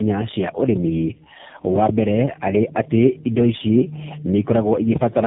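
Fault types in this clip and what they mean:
Tandem speech coding: the speech passed through several low-rate coders in sequence, most likely iLBC, GSM full rate and AMR-NB 7.4 kbit/s, with G.711 links between them, so each coder re-encoded the previous one's errors. The speech sounds rough, muffled and warbly. On a spectrogram, energy stops sharply near 3.7 kHz, and harmonics look smeared and blotchy between frames. The waveform shows ragged, noisy envelopes rather than clean pitch periods.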